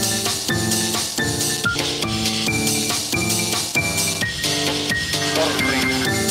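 A skip ahead at 1.75 to 1.77 s: about a second of audio was discarded while later audio waited, so playback jumps forward, the two sides joined with no gap. Jitter buffer speed-ups follow at 2.33 to 2.58 s (117%) and 3.14 to 3.24 s (147%): short pitch-period pieces, about 50 ms each time, were cut to drain excess delay, so the sound briefly hurries at unchanged pitch.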